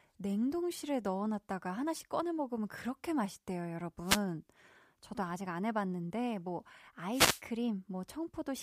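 Speech recording with two wireless microphone noise hits, at 4.04–4.21 s and 7.10–7.42 s. Each is a brief burst of static. The FM radio link faded and receiver noise rose.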